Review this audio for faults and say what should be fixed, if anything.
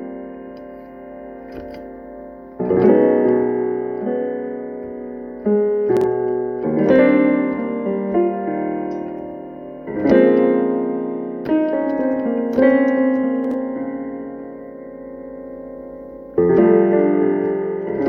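Chunks out of order at 5.97–6.04 s and 13.44–13.54 s: a roughly 23 ms chunk plays two, then three chunks late, leaving a jumbled moment with hard joins. Chunks that size fit 1024-sample buffers at 44.1 kHz; reorder them by sequence number or timestamp before writing so a late chunk lands in its proper slot.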